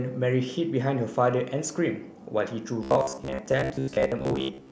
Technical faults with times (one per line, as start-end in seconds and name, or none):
2.83-4.71 robotic sound from repeated short buffers